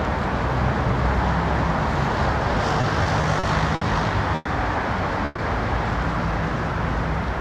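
Everyday sounds that catch and drag between 2.81 and 3.83 s, where five short holds totalling 160 ms (none longer than 60 ms) break the flow into a stutter. These are repeated stalls: packets kept arriving late, so the jitter buffer ran dry and the receiver stretched the last sound each time, losing nothing. Two call audio freezes follow, at 4.35 to 4.47 s and 5.25 to 5.40 s, where the sound hangs as a fading buzz or hiss for about 100 ms and 130 ms before resuming. Each is likely a network delay emptying the buffer, with the receiver filling the wait rather than going silent.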